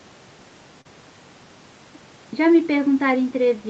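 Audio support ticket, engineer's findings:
Short concealed packet loss, 0.81–0.87 s: 40 ms missing, 34 ms patched by extending the preceding sound, then blended back into the real audio, giving a brief smear. Content stops at 8 kHz, fitting the Opus call path's bandwidth setting.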